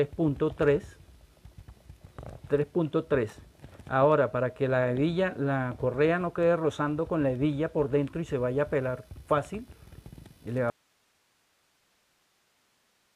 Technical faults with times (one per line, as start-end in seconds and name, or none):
10.70-13.15 audio dropout to a faint residue